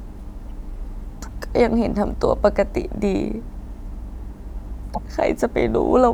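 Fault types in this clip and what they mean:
Corrupt frame decoded: damaged compressed frames were played as though valid, so misread gains and codes put energy at the wrong frequencies. In this speech it shows as a faint, short artifact from 0.41 to 0.51 s and a much louder one from 4.94 to 4.98 s, each lasting only a few frames' worth. Unlike a dropout or concealed packet loss, the sound is not smeared; foreign energy is added instead.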